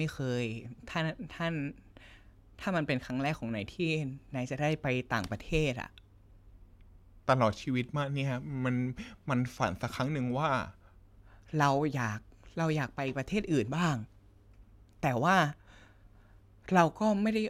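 From 6.53 to 11.07 s there's a section at the wrong speed: the speech runs at about 0.89 times its proper rate, so it drags and drops roughly two semitones, sounding deeper and slower. That's likely a playback or edit stage working to the wrong clock.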